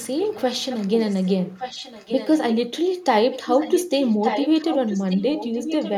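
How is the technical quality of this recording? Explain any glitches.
The recording has a recurring echo leak. From 0.19 to 0.9 s, 1.07 to 2.55 s, and 3.31 s to the end, a copy of the speech trails about 1.17 s behind. It sits roughly 15 dB below the speech at first and grows to about 10 dB below in the final stretch. The likely cause is a far-end loudspeaker whose echo canceller let part of its microphone pickup return down the line.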